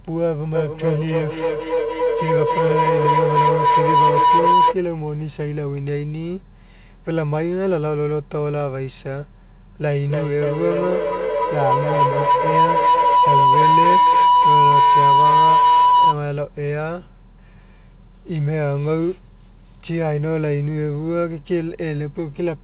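Feedback howl rises from 0.55 to 4.8 s and again from 9.87 to 16.19 s. It is a tone near 1 kHz, pulsing about every 300 ms and peaking about 7 and 8 dB above the speech. Unlike plain echo, the repeats grow rather than fade, because the microphone-to-loudspeaker loop gains level on each trip.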